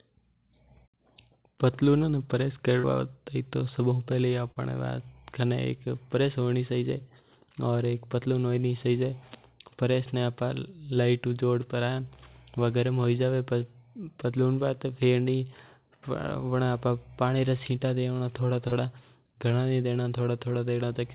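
Short concealed packet loss at 2.80–2.86 s, 4.51–4.59 s and 18.68–18.75 s: about 40 ms of the call arrived too late each time, so the receiver extended the preceding sound and blended back, leaving a brief smear or wobble. The call audio carries nothing above 4 kHz, which fits G.711 mu-law.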